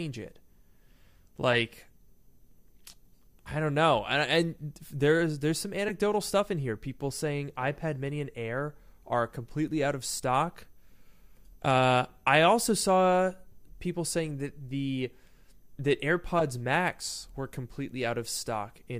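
Corrupt frames decoded appear at 1.53–1.56 s, between "there's there's some" and "stuff in here" at 5.88–5.91 s, at 8.09 s, between "I also saw" and "people saying that the" at 13.52 s, and at 16.39–16.43 s. Damaged frames were played as if valid, misplacing energy across the spectrum. The results are short chirps or noise blips, loud at 1.53, 5.88 and 16.39 s and faint at 8.09 and 13.52 s. Unlike a concealed dropout, they add foreign sound rather than leaving a gap.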